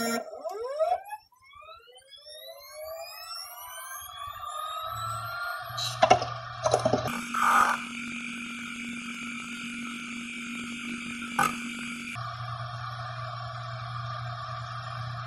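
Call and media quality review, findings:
7.08–12.20 s: sound jumps an octave high with a flutter near 23.4 Hz, yet overall pace holds, unlike a sample-rate mismatch. Planar audio read as interleaved: each 42.67 ms block, fitting 2048 samples, plays left then right at double speed.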